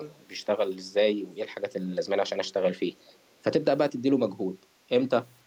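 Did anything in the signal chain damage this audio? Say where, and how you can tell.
Yes. Two brief echo leaks sit in the call-processing stage, at 0.09–0.2 s and 3.09–3.18 s. Each is a faint delayed copy of the speech, roughly 35 dB below it, arriving about 457 ms and 499 ms late. The cause is likely a far-end loudspeaker whose echo canceller let residual pickup through and sent it back. The near half-second delay and low, scrappy level fit canceller residue rather than a room reflection.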